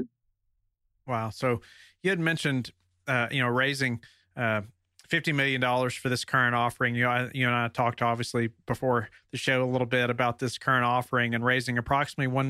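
No technical faults can be heard anywhere in the speech. The signal stays steady throughout, with no event that would call for a timestamp.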